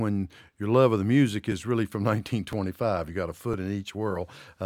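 Overlapping chunks at 0.52, 1.52, 2.53 and 3.54 s: each one-second chunk starts early, replaying about 6.5 ms at the join, heard as a regular click or stutter.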